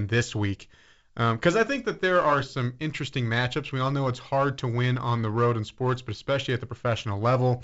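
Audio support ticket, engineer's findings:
Findings: no faults found on the G.722 wideband telephone coding path at 64 kbit/s.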